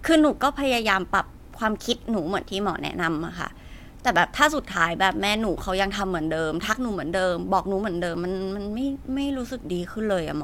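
Overlap between stream segments causes tiny skips in this speech at 4.16 s and 8.15 s: overlapping timestamps at the 4 s segment joins make the player cut about 18 ms, jumping the waveform.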